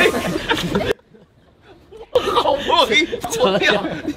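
The signal path likely lost its source while staying live: an audio dropout to a faint residue from 0.91 to 2.15 s, leaving only sound roughly 25 dB down before it snaps back.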